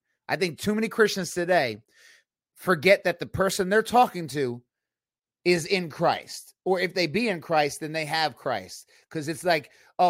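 No audible technical faults anywhere in the speech recording; nothing to flag.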